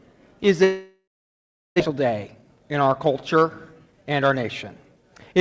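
From 0.64 to 1.82 s a long network dropout likely occurs: a fading buzz, then about 0.72 s of flat, near-empty waveform, and the audio resumes with a piece missing. From 1.89 to 5.33 s a jitter buffer speed-up trims about a third of a second, so the sound runs 8% faster at unchanged pitch. On the spectrogram the harmonics stay level while events crowd closer together, all below the call path's 8 kHz ceiling.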